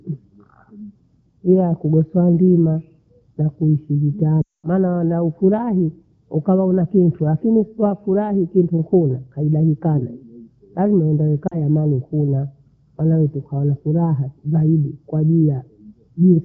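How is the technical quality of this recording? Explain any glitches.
Two dropouts from lost AMR speech frames break up the speech, carried over a lightly degraded AMR wideband (HD Voice) link. At 4.41 to 4.67 s, after "ndimaa yakuhusu", the decoder repeats its last pitch and vocal tract settings with falling gain, so the sound drops to near silence within two frames before "wanofurahi ukawa huna kintu". At 11.47 s, just before "ambaye ni kula kala", a shorter 0.04 s loss produces a brief dip.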